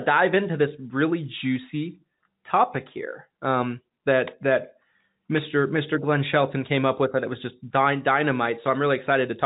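Nothing stood out on listening to this speech, which carries the narrow band of ordinary G.711 telephone coding with nothing above about 3.8 kHz.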